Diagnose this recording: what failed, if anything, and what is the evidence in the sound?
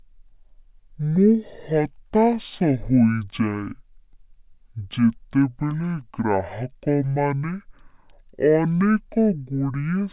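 The speech sounds low and dragging from start to finish, exactly half speed and a full octave (12 semitones) down. This is a wrong sample rate fault at playback: the samples are clocked out at half their intended rate without conversion, which fits 16 kHz audio played at 8 kHz.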